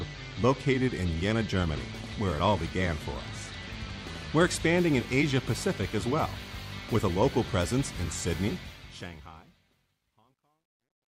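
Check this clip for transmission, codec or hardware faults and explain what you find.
Two faults are present: a mains buzz running through the whole clip, and truncation distortion on the closing fade.

Mains buzz, throughout: switching spikes from unshielded or rectifier-fed power get into the signal path twice per 50 Hz cycle. This adds a steady, raspy buzz rich in harmonics up into the kilohertz range, sitting roughly 20 dB below the sound.

Truncation distortion on a fade, 8.50 to 11.19 s: the fade-out runs from about 8.5 s to 11.2 s, but the gain stage keeps too few bits and applies no dither, which fits a 12-bit path. As the level shrinks, the waveform collapses into coarse steps. From 9.61 s to the end, the tail turns gritty.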